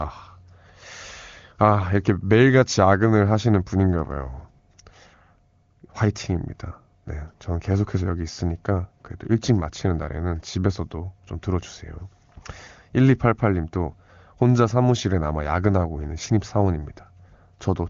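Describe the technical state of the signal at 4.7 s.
At 4.7 s the signal is intact, with the speech carried cleanly through an AMR wideband (HD Voice) path whose clarity fits one of its upper rates, around 23.85 kbit/s, and whose top end stops near 7.3 kHz.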